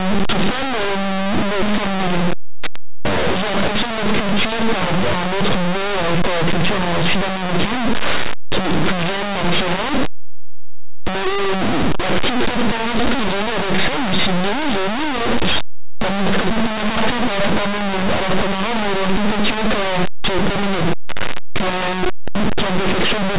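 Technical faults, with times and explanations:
Throughout, linear audio read as companded: plain 8-bit speech is being decoded as mu-law, so tiny samples just on one side of zero jump to the largest outputs while those on the other side stay small, giving harsh, constant distortion.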